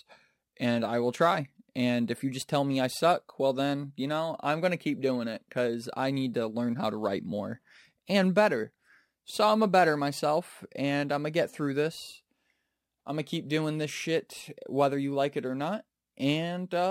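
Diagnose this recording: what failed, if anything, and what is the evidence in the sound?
Sample-format conversion failed: the speech went through a crude rate conversion that repeated the nearest existing sample instead of filtering and interpolating. The resulting errors recur in a fixed pattern, which fits a change from 44.1 kHz to 48 kHz. Throughout the clip, a gritty, inharmonic fizz sits roughly 30 dB below the speech. It rises with louder and brighter syllables, and its tones bear no relation to the voice's pitch.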